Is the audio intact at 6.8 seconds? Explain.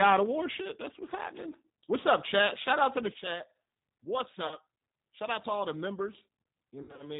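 No. VoIP packet loss concealed by the speech codec runs from 6.83 to 7.06 s: about 120 ms of audio lost in runs up to 60 ms across 160 ms. The decoder extends its last pitch and filter into a fading buzzy tone or coloured noise rather than dropping to silence, and the sound stays weak briefly after recovery. Underneath, the G.729 codec cuts everything above 4 kHz and leaves a rough, synthetic pulse texture, consistent with an 8 kbit/s speech coder rather than a plain low-pass.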